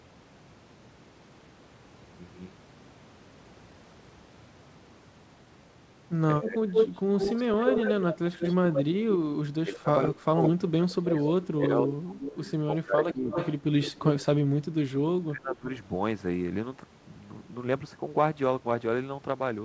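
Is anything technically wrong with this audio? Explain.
Yes. The speech has two related faults, both typical of a speakerphone call where both ends talk at once. The audio is band-limited with nothing above 8 kHz, which fits a wideband call codec such as G.722.

Speech suppressed in double talk occurs at 6.39 to 6.75 s, 9.63 to 13.33 s and 13.91 to 15.68 s. The level drops by roughly 25 dB in the first event and roughly 20 dB in the later two. Across the long middle stretch the dips add up to about two seconds, and in the last to about one second. The likely cause is an echo canceller that could not tell the local talker apart from loudspeaker echo during overlapping speech, so it attenuated everything. The talker audibly sinks or breaks up in pieces.

Echo leak is heard at 6.73 to 8.82 s, 9.74 to 10.46 s, 11.11 to 12.51 s and 13.09 to 13.92 s. A delayed copy of the speech trails the original by 165 ms in the first two events and 292 ms in the last two. 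It is about as loud as the speech at first, then sits about 10 dB below it and finally about 5 dB below. This is likely residual loudspeaker pickup that the far end's canceller failed to remove and sent back.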